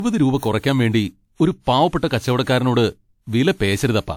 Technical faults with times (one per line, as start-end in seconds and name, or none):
0.00-4.17 generation loss